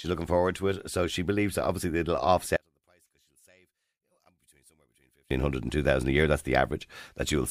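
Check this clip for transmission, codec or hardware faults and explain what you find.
One fault stands out, between 2.56 and 5.31 s, just after "believes that obviously it'll" and ending before "hundred and two thousand". It is likely one channel inverted: one side of the stereo pair has flipped polarity, so when the two are summed to mono the shared centre signal cancels itself out. The speech drops by about 37 dB and nearly disappears, leaving only a faint residue of whatever differed between the channels until normal level returns.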